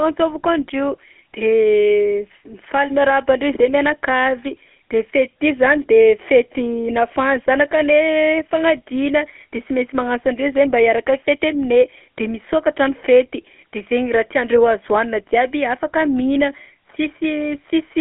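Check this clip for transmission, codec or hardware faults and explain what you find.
One fault runs through the entire recording: GSM full-rate codec coding. Throughout, the speech has a plainly audible buzzy, gravelly roughness and a narrow telephone band from 250 Hz to 3.4 kHz, with nothing above 3.7 kHz. The codec rebuilds the voice from a vocal-tract model excited by sparse, regularly spaced pulses that keep only every third excitation sample, which fits 13 kbps GSM full rate.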